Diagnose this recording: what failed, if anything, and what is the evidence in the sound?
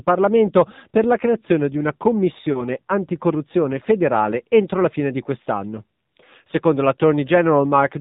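AMR narrowband mobile codec, throughout, at the codec stage: the speech has no content above 4 kHz and sounds plainly buzzy and synthetic, which fits AMR-NB at about 7.4 kbps.

Lost AMR speech frames, 2.52 to 2.67 s, at the network stage: between "la creazione di una" and "anticorruzione federale entro la", a brief dip or warble points to one 20 ms frame concealed by the decoder.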